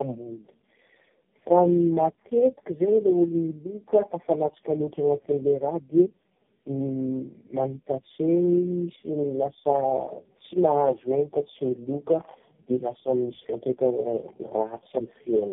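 Tandem speech coding runs throughout. Four speech codecs in a row each recode the previous damage. The speech sounds rough, muffled and warbly, with nothing above 3.7 kHz.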